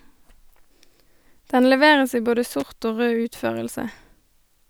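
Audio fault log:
2.60–2.67 s, loose connector crackle: just after "leveres i både", a worn contact makes and breaks rapidly, chopping the speech into a brief, irregular scratchy burst.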